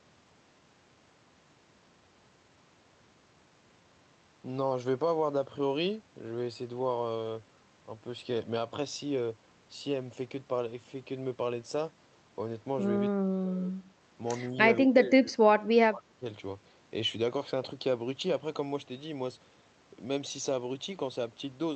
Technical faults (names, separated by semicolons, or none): speech suppressed in double talk